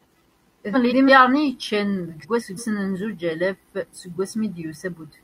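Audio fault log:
0.73–1.10 s and 2.22–2.59 s, frames out of order: in each stretch the speech plays with its two halves swapped, each about 0.17 s long, which fits runs of four frames. The later half comes first, so the sound flutters and garbles. No time is lost. On a spectrogram, formant tracks break and restart out of sequence; the waveform shows abrupt envelope jumps there.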